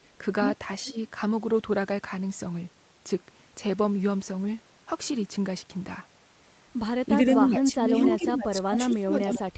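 From 7.24 s to the end, the speech is suppressed in double talk. The level sinks and comes back in uneven pieces, falling by roughly 25 dB at its deepest. Parts of the talker drop away almost entirely. This is likely an echo canceller meeting speech from both ends at once. It could not tell the local talker from the loudspeaker echo, so it turned everything down.

Echo leak appears twice inside that stretch, at 7.98 to 8.11 s and at 9.22 to 9.36 s. Each is a short scrap of the voice coming back 380 ms late. The first is about as loud as the speech itself. The second is a little quieter. The likely cause is a far end on loudspeaker whose canceller let part of its microphone pickup through, so the voice returned as an echo.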